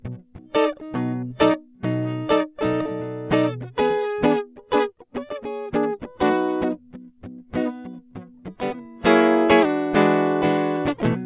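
Nothing technical goes wrong anywhere in this piece of music, so there's no fault to point to at any moment.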